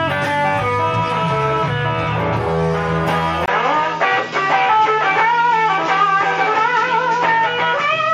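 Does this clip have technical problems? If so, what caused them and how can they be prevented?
Yes. At 3.46 s, after a 20 ms gap, the sound turns duller, likely from an input switched to a poorer device. A spectrogram shows everything above 7.6 kHz cut off and a faint new noise floor, while the waveform's level holds steady. Locking the input device prevents this.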